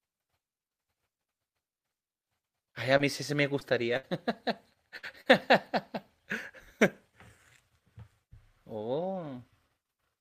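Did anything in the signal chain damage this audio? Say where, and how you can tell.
Yes, at the network stage. Short concealed packet loss appears at 2.97 to 3.01 s and 3.59 to 3.63 s. Each is a brief smear where about 20 ms of speech failed to arrive. The decoder extended the preceding sound to cover it, then blended back.

Three bursts of packet loss follow, at 3.97 to 4.05 s, 4.97 to 5.05 s and 5.21 to 5.28 s. About 60, 60 and 40 ms went missing. The receiver stretched the last sound into a fading buzz or hiss, and the speech resumes with the lost stretch gone.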